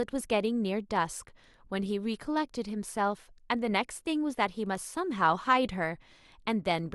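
Nothing in this one stands out on the technical side, as the speech carries on with no audible faults at any point.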